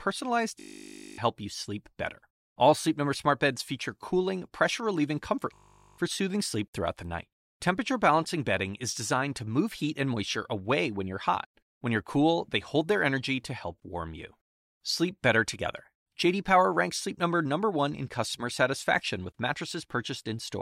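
From 0.60 to 1.18 s, and again from 5.54 to 5.98 s, the speech is replaced by a system hang loop: the machine stalled while the audio hardware kept replaying one 20 ms stretch of its buffer. Each freeze becomes a steady 50 Hz buzz, with roughly half a second of speech lost in the first and a little less in the second. A spectrogram shows evenly spaced harmonic lines at multiples of 50 Hz, and the waveform shows one identical cycle repeating.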